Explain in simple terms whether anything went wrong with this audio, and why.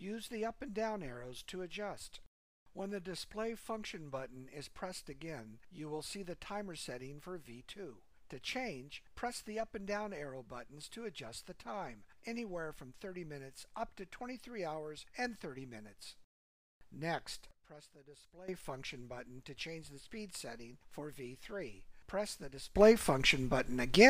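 Something went wrong twice: a sudden gain jump, likely from a volume setting being changed instantly instead of faded in. At 17.51 seconds the level drops sharply and everything, background hiss included, goes much quieter until 18.48 seconds. At 22.76 seconds it leaps much louder and stays that way to the end. Because the change happens from one instant to the next, each jump can come with a small click.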